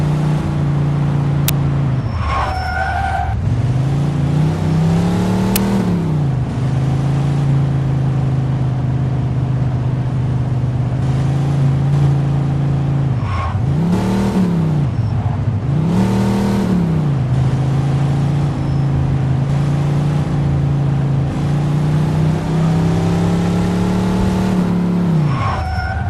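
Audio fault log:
1.48 s and 5.56 s, uninitialised buffer: two short, harsh bursts of digital noise, each about 11 ms long, break sharply into the sound and stop just as abruptly. Each time, a block of memory went to playback before any audio had been written into it, so whatever leftover data it held was played out as samples. The length of each burst fits a 512-sample buffer.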